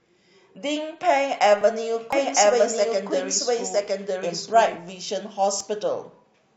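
Two stream segments carry overlapping time stamps from 1.61 to 1.63 s, and the player trims that span from speech that was never actually duplicated. About 20 ms disappears, and this overlap between stream segments is heard as a small skip.

From 2.13 to 4.77 s, a second copy of the speech is mixed in, likely captured again through a slower path. The doubled audio track is a dry, full-band repeat arriving about one second behind, at much the same level, and it starts and stops abruptly.

The segment overlap returns at 5.61 s, roughly 4 s after the first, which fits 4-second segments. This time a few milliseconds vanish, giving another brief skip.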